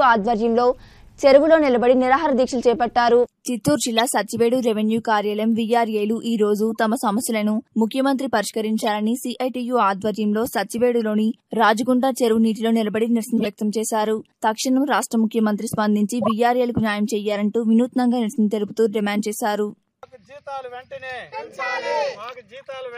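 Corrupt frame decoded: damaged compressed frames were played as received, misplacing energy in frequency and causing brief chirps or noise bursts at 3.97, 8.82, 11.02, 13.37, 16.22 and 19.15 s.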